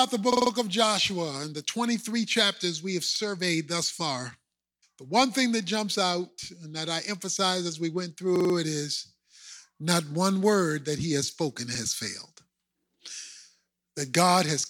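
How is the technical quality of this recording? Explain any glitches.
Four stutters from a repeated buffer mar the recording, at 0.33–0.51 s and 8.36–8.55 s (each segment heard four extra times) and at 3.16–3.20 s and 11.75–11.80 s (one extra play). Fresh audio arrived late, so the device replayed its last 46 ms block, which fits a 2048-sample buffer, and essentially nothing is lost. Each one is heard as a short stutter, the same short piece sounding again with a hard join at each repeat. The waveform shows identical 46 ms copies, and the spectrogram shows vertical lines at each hard join.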